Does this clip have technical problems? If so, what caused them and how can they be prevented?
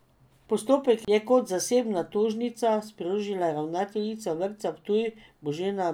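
No, nothing in this recording sounds like a technical problem, so there's nothing to trace back or guard against here.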